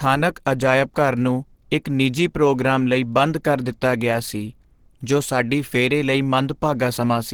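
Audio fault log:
throughout Opus compression: the speech sounds hoarse and grainy, with plainly audible codec damage, and the likely cause is a low-rate Opus encode in its hybrid speech mode, which fits a rate near 16 kbps. Content still reaches about 20.2 kHz, so this is roughness rather than lost top end. Unlike MP3, there are few swirling, watery spectral holes, because bands are kept filled instead of dropped.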